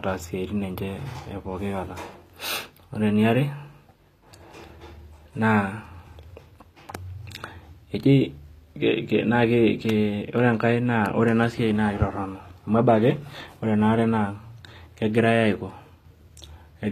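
From start to finish the speech carries plainly audible damage that sounds like HE-AAC compression at a low rate, likely around 24 kbps. The upper band is not coded directly but rebuilt from copied lower bands under a coarse envelope, so sibilants come out gritty and lispy, with a metallic sheen where the synthetic treble fails to align with the real harmonics below it. Nothing remains above about 14.9 kHz.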